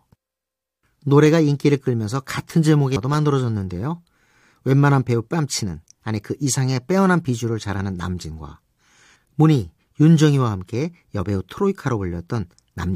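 Damaged data in a compressed stream shows up twice, at 2.95 s and again at 7.78 s, each as a brief chirp or blip cutting into the speech. At both points part of the encoded data is wrong, so the decoder misreads the affected frame, loses its place in the stream and has to hunt for the next valid frame header before normal playback resumes. Each disruption is over in under 20 ms.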